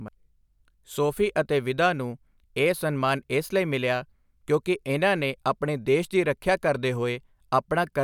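No technical faults are audible.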